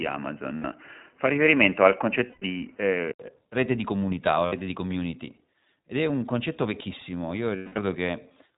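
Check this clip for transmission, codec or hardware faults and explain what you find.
Yes, three kinds of fault are audible: a narrowband codec throughout, a different input device at the start, and four packet-loss gaps.

iLBC codec, whole clip: speech squeezed through a narrowband low-rate coder, consistent with iLBC at 15.2 kbps in 20 ms frames. Nothing reaches above 4 kHz, and voices sound plainly rough and synthetic.

Input switched to a poorer device, 0 to 3.2 s: the system was likely recording from a narrower microphone path. That opening stretch stops near 3 kHz and sounds duller, with faint added hiss. The level shifts by about 5 dB and there is an 80 ms silence at the changeover.

Lost iLBC frames at 0.56 to 0.65 s (80 ms), 2.26 to 2.43 s (140 ms scattered, longest run near 100 ms), 4.46 to 4.54 s (60 ms) and 7.56 to 7.78 s (200 ms): the decoder fills missing packets by repeating the last pitch cycle with noise. 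Each gap sounds like a held, buzzy vowel that fades on the longer losses, with clean recovery right after.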